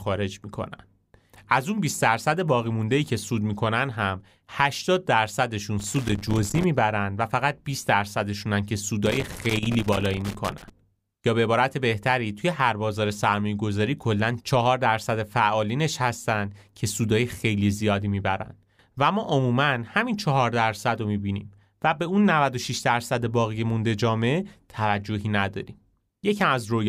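From 5.80 to 6.64 s, and again from 9.06 to 10.70 s, the speech breaks into loose connector crackle. A worn or dirty contact keeps making and breaking as it shifts. That chops the signal into an irregular burst of crackle and scratching.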